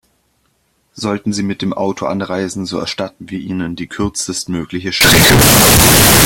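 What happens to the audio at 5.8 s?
At 5.8 s the speech is caught in a float read as integer fault running from 5.01 s to the end at 6.25 s. The samples were likely written as 32-bit float but read as 32-bit integer, so sign and exponent bits dominate. The sound turns very loud and harsh, with background noise as loud as the speech. The waveform flattens into near-square blocks at an almost fixed, high level, and a spectrogram shows dense broadband energy.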